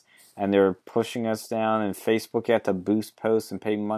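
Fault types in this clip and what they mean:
No faults can be heard in this recording.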